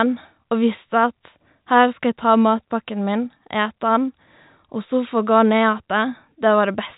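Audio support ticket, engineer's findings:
No fault found; telephone-band speech as expected.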